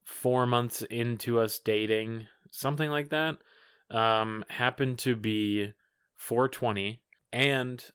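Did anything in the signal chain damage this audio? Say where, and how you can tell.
No, nothing in this speech stood out on listening as damage from any stage of the signal chain.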